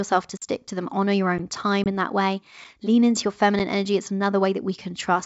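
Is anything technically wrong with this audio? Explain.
Yes. The speech has two kinds of fault.

Blocks of digital silence occur at 0.37–0.42 s (46 ms, which fits a 2048-sample buffer), at 1.38 s (12 ms, which fits a 512-sample buffer) and at 3.59 s (8 ms). The output buffer likely went unfilled and zeros were played. The signal drops abruptly to silence and back. The longest gap is a short hole and the shorter two are ticks. On a waveform each is a flat line. On a spectrogram it is a blank vertical strip with broadband lines at its edges.

Packet loss on an ADPCM call causes a 20 ms hole at 1.84–1.87 s, about one packet. Because G.722 is itself an ADPCM coder, the receiving decoder's predictor and step size lose sync with the sender's. Speech returns after a hard-edged gap with some distortion, settling within tens of milliseconds. The waveform shows the gap followed by jagged samples. 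The spectrogram shows a blank strip followed by a brief smear.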